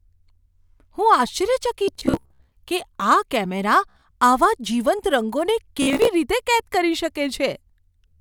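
A speech recording with Bluetooth stutter at 1.85–2.52 s (ending before "કે આ કેમેરા આવા"), 3.90–4.03 s (between "કે આ કેમેરા" and "આવા જીવંત") and 5.82–6.09 s. Late or dropped packets made the receiver replay short slices, with repeat runs up to 61 ms, before the sound jumps ahead.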